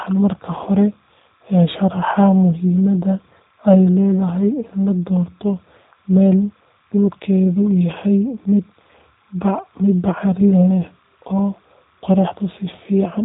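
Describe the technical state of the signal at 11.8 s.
At 11.8 s a faint, steady chirping warble sits behind the speech, roughly 40 dB down and running through the whole clip. This is timecode bleed: linear timecode from an adjacent track or cable leaking in as a square wave flipping between about 1 kHz and 2 kHz, at a rate consistent with 29.97-frame code.

The speech itself sounds plainly rough and synthetic, with a dull top and nothing above 3.8 kHz, again for the full length. That is G.729 codec damage: the low-rate coder rebuilds each 10 ms frame from a vocal tract filter, a pitch predictor and a few pulses, which fits an 8 kbit/s G.729A stream.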